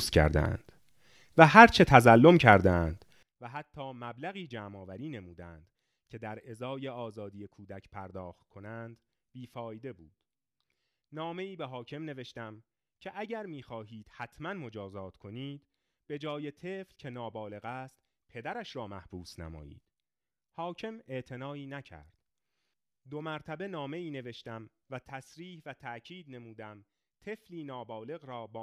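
A speech recording that, from 3.23 s to the end, drops by about 25 dB into a faint residue. That's the classic sign of one channel inverted: the centred voice cancels on a mono sum, likely from a polarity flip on one side.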